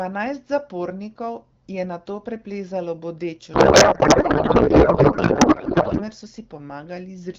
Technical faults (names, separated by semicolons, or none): codec payload misread